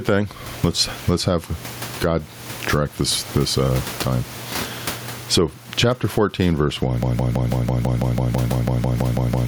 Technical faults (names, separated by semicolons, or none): gain pumping